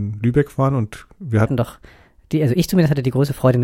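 At 1.46 s, right after "waren und wir", a section at the wrong speed begins and runs to the end. The speech plays about 1.23 times too fast. Pitch jumps up by about four semitones at once. The voice sounds high and hurried. A likely cause is playback against the wrong clock.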